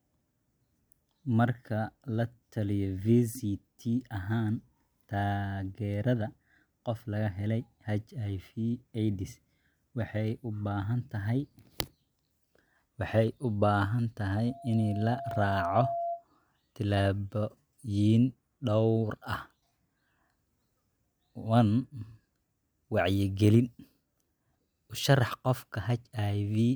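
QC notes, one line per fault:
14.47 to 16.25 s, loudspeaker feedback squeal. A pure tone near 685 Hz swells over about a second until it is roughly as loud as the speech. The microphone is picking up its own loudspeaker, and the loop's gain exceeds one at that frequency.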